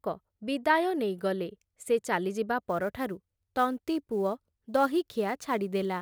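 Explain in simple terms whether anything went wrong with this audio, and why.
From 2.63 s to the end, the speech picks up a faint hiss that grows on loud, sharp sounds. This is sample clock jitter: an unsteady converter clock mistimes samples by several microseconds.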